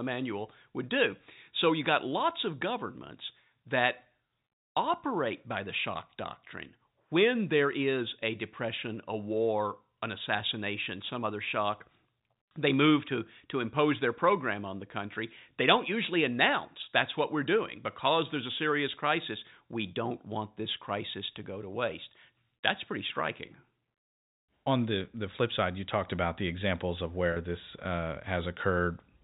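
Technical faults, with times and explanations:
12.49–12.51 s and 27.33–27.36 s, packet loss with pitch repetition: each time about 30 ms of speech drops out, once between "assassination some other shock" and "they move to to", and again between "about the examples of" and "this uh". The receiver fills each hole by looping the last pitch period it had and fading it down, so the gap sounds like a brief held, buzzy tone rather than silence, with the 4 kHz telephone band of the G.711 path unchanged around it.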